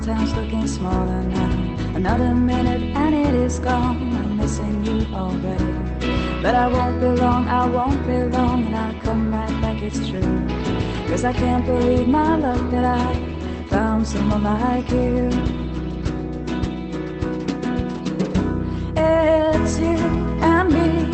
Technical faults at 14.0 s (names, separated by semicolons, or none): none